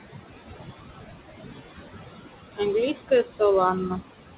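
Throughout the speech, the background noise drops away between phrases and returns underneath them. These are noise suppressor artifacts. The suppressor judges, frame by frame, which frequency bands hold only steady noise and turns them down by about 18 dB. The room noise, which sits only about 9 dB below the speech, swings in and out as the speech starts and stops.

From 2.94 to 3.41 s, parts of the speech go faint and swallowed, as if word edges were being pulled under. This is speech cut by the noise suppressor. It mistook quieter speech energy for the noise it was removing and lowered it along with the background, by about 16 dB at the deepest point. The losses fall within that half-second and add up to roughly a fifth of a second of affected sound. The call sound is band-limited, with nothing above 4 kHz.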